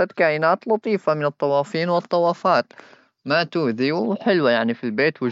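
Nothing in the speech recording stood out as a technical fault on listening.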